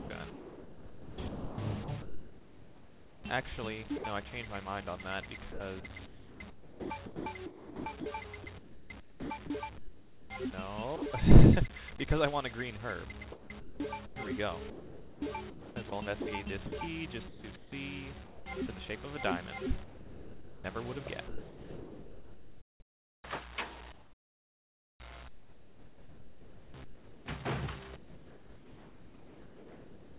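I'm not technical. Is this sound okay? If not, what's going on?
No. During four stretches, 0 to 4.04 s, 5.52 to 11.02 s, 13.32 to 18.46 s, and 19.84 s to the end, the sound keeps cutting in and out, with quieter parts swapped for a soft, artificial hiss. This is likely sound chopped by the voice detector. The sending side judged those moments to be silence and stopped sending them, so the receiving end filled the gaps with comfort noise. In the last stretch nearly 8 s was replaced this way. The dull, phone-like tone, with nothing above 4 kHz, comes from the call line itself.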